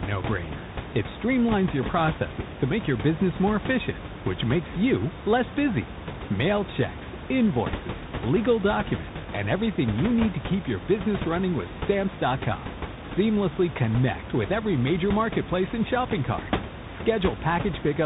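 Throughout, the speech sounds rough and noisy, with nothing above 3.8 kHz: tandem speech coding, re-encoded through CVSD, then G.711 and G.726, each compounding the last's damage, with the room noise sitting about 10 dB below.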